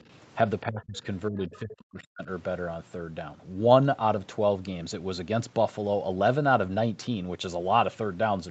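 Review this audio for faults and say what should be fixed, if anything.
Speech suppressed in double talk at 0.65–1.06 s and 1.29–2.28 s. The talker's level drops by about 25 dB, then about 40 dB. This is likely an echo canceller turning down its own talker along with loudspeaker echo. Unlike a network dropout, the drops follow overlapping talk. Tuning double-talk detection to protect near-end speech would prevent it.

Other side's voice leaking through at 1.53–1.58 s, about 25 dB below the speech. This is likely residual loudspeaker echo. It adds a second voice, rather than lowering this talker. Stronger echo cancellation or a headset would stop it.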